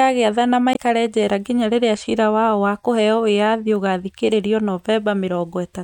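A short glitch breaks into the speech from 0.72 to 0.77 s, caused by damaged data in a compressed stream: corrupted bytes there make the decoder misread those frames and lose sync until it locks onto the next valid frame header.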